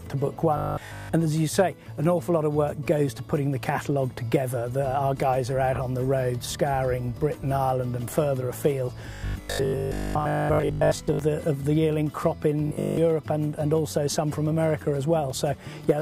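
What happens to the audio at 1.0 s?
At 1.0 s the audio is in a stretch of robotic sound from repeated short buffers, running from 0.57 to 1.13 s. Audio likely arrives too seldom, so a 20 ms slice is looped through most of the span, forcing a rigid 50 Hz metallic buzz. A spectrogram shows evenly spaced horizontal lines at multiples of 50 Hz, and the waveform shows identical 20 ms cycles.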